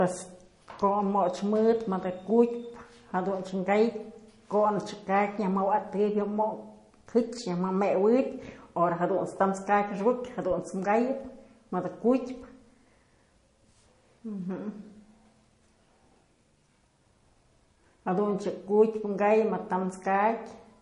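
The whole recording carries plainly audible MP3 compression damage, likely from a low bitrate near 40 kbps. Treble stops dead at 10.5 kHz. Speech sounds watery and swirly.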